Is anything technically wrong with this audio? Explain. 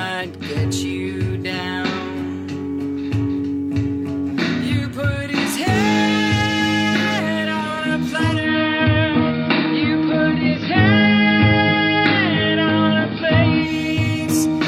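Yes, one thing. From 8.35 to 13.74 s the digital radio blends to analogue: it lost digital and crossfaded to AM over 134 ms, so level shifts about 3 dB, and faint hiss creeps in.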